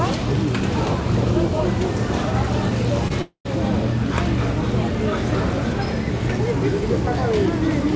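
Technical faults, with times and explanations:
3.08–3.12 s, short concealed packet loss: About 20 ms of the stream never reached the decoder in time, so the receiver bridged the gap by extending the preceding sound for roughly 18 ms and then crossfading back into the real signal. Because the patch is built from what came just before rather than what was actually there, it comes across as a brief smear or wobble where the sound's texture momentarily stops evolving.
3.22–3.47 s, long network dropout: The likely cause is an interruption in delivery lasting about a quarter of a second, during which nothing new arrived. The receiver kept synthesizing from the last good audio, stretching it for around 230 ms as a fading buzz or hiss, and about 100 ms of that stretch is plain silence. When the stream resumes at 3.47 s, the roughly 240 ms of real sound that was lost is simply gone, so the audio jumps ahead. 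All of this sits within a band that stops at 8 kHz.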